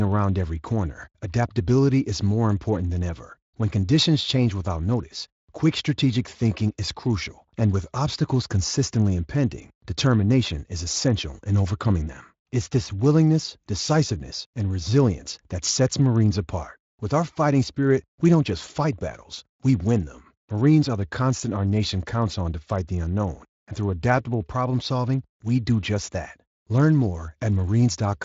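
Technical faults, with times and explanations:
No faults; the speech passes through the Speex codec working as intended, with its band topping out near 7.6 kHz.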